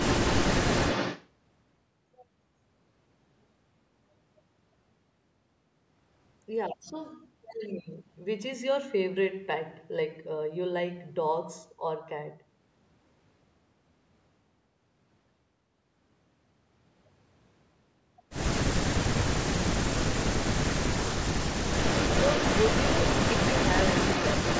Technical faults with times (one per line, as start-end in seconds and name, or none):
0.00-1.29 echo leak
19.51-21.56 speech suppressed in double talk
21.71-24.60 echo leak